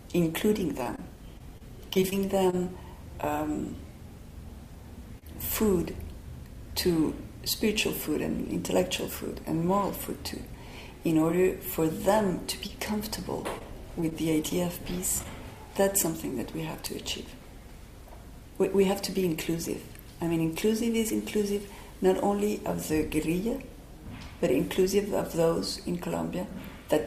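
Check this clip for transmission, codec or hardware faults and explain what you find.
Three packet-loss faults affect the clip, all of them losses in transmission that the receiver covered up.

Repeated packet loss (robotic sound), 0.83 to 2.55 s: across this stretch, data arrived missing or too late nine separate times, about 120 ms in total, with the longest gap 25 ms. Each time, the receiver extended the preceding sound to fill the hole, patching 162 ms, roughly 9% of the span. Because the patches come one after another, the audio turns choppy and takes on a synthetic, robotic edge, with fragments dropped out.

Short concealed packet loss, 5.19 to 5.24 s: a single 20 ms piece of the stream never reached the decoder in time. The receiver generated 28 ms of replacement by carrying the last sound forward, reusing its pitch where the signal was tonal and shaped noise where it was not, then crossfaded back into the real signal. 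The result is one brief smear or wobble.

Scattered short gaps, 12.24 to 15.27 s: about seven isolated losses are spread through this section, adding up to 100 ms of missing audio, none longer than about 20 ms. Each hole was filled separately by continuing the sound just before it, which covers only a few percent of the stretch. The audio stays clear, but individual ticks, small smears and momentary hiccups show up here and there.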